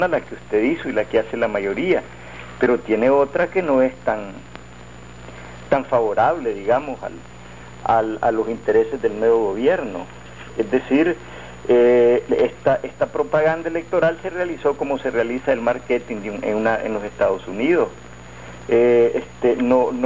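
No technical faults can be heard anywhere in the clip, and the signal stays steady and intact for its whole duration.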